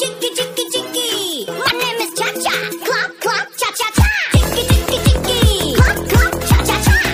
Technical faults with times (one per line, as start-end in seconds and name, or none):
1.63-1.72 damaged data in a compressed stream